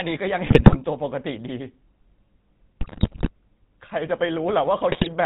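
Across the whole clip the speech has a buzzy, gravelly roughness with nothing above 4 kHz, the plainly audible signature of the GSM full-rate codec. Its vocal-tract model is driven by sparse, regularly spaced pulses, which fits GSM's 13 kbps full-rate coding.

From 0.46 to 0.77 s, 2.80 to 3.30 s and 4.90 to 5.08 s the speech breaks into squawks, pops and gargling. These are GSM bit errors: corrupted filter, pitch or gain values distort the spectrum or spike the level frame by frame.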